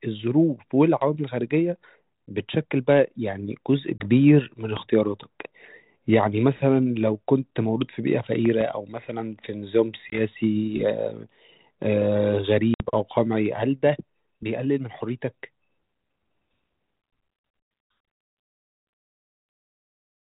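A hard-edged 20 ms hole at 3.98 s, after which the speech comes back slightly distorted before settling: packet loss on an ADPCM call. A lost packet was filled with silence, leaving the decoder's adaptive predictor and step size out of step with the sender's.

At 4.77 s a sharp loud pop, well above the speech, sits on top of the sound, likely a sudden voltage step from a plug, switch or static discharge.

Between 8.46 and 8.64 s, two pops in quick succession cut through the speech with the same abrupt, thumping quality.

The same packet loss recurs at 10.1 s, again a 20 ms gap, then at 12.74 s with a longer 60 ms gap that suggests about three consecutive packets. Each time the speech resumes with a brief rough edge. That rough edge comes on top of the light, level-following hiss of the 32 kbit/s G.726 coding, which also keeps everything below 4 kHz.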